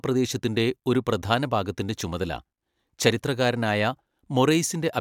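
No technical faults can be heard anywhere in the recording.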